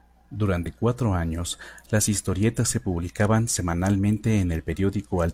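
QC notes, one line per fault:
0.62–0.66 s, damaged data in a compressed stream: a brief glitch lasting about 40 ms just before "cuatro años las historietas". Corrupted bytes made the decoder misread those frames, lose sync and resume at the next valid frame header.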